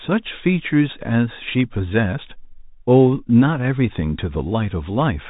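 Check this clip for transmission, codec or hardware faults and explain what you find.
One fault runs through the whole clip: the Bluetooth CVSD headset codec. The speech is narrowband and thin, with nothing above about 3.8 kHz, a grainy hiss beneath it, scratchy s sounds and loud bright moments breaking up. CVSD codes each sample as one up-or-down bit, consistent with a 64 kbps stream, and its adaptive step can't keep pace with fast, loud changes.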